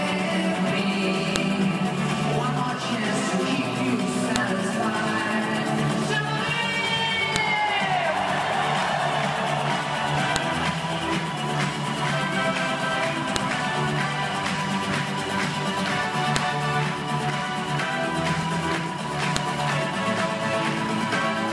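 Sharp clicks at 1.36, 4.36, 7.36, 10.36, 13.36, 16.36 and 19.36 s are a file header played as audio. Unlike random glitches, they recur exactly every 3 s, wherever joined pieces begin.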